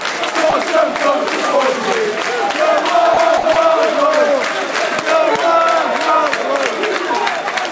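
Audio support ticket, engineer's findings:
Brief cut-outs to steady comfort noise, 30 ms at 0.50 s, 3.14 s, 3.53 s and 60 ms at 3.38 s. Sound dropped by the voice detector, likely. Sender VAD misjudged the sound as background. Band limited to 8 kHz on the G.722 call path.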